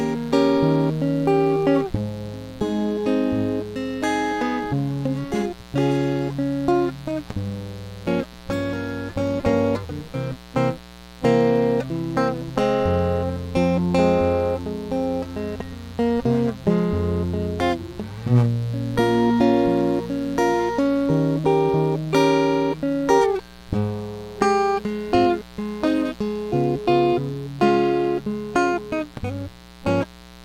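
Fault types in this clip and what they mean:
Mains buzz: A steady, raspy 60 Hz buzz with harmonics up to several kHz runs under the music throughout, roughly 20 dB below it.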